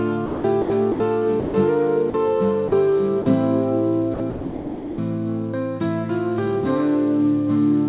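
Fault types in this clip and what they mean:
Sound chopped by the voice detector: The audio repeatedly cuts out and returns within a short span, with gaps filled by a steady synthetic hiss. This is likely a voice detector toggling between sending and muting. It happens from 0.26 to 1.0 s, where about 340 ms is replaced, and from 4.14 to 4.98 s, where about 740 ms is replaced. Across the 4 kHz-limited call band, the gaps are filled with synthetic noise.
Sound dropped by the voice detector: A single stretch of sound vanishes and is replaced by flat comfort noise until transmission resumes. The likely cause is a detector classifying quiet material as background and stopping transmission. It occurs from 1.40 to 1.54 s, losing 140 ms, then three brief 40 ms dropouts at 2.10 to 2.14 s, 2.68 to 2.72 s and 3.22 to 3.26 s. Each one is a momentary hole where the sound gives way to even, featureless noise.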